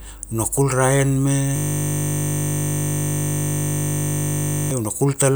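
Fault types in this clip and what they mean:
System hang loop: the playback system stalled while the audio hardware kept replaying the same 20 ms ring buffer, so from 1.56 to 4.71 s the speech gives way to one short fragment repeating about 157 times, heard as a steady 50 Hz buzz.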